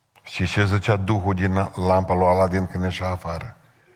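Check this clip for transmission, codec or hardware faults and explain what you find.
Nothing here sounds like a transmission, codec or hardware problem; the speech comes across through Opus voice compression at 24 kbps in its full-band hybrid mode, and the only coding damage is light.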